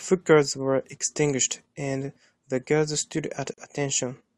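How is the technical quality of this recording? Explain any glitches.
One glitch affects this speech recording. From 3.54 to 3.58 s, a gap at a join of encoded pieces cuts about 42 ms of silence into the speech. Separately encoded segments were spliced with their encoder delay and padding untrimmed. It shows as a blank vertical stripe on a spectrogram and a flat waveform with smeared edges.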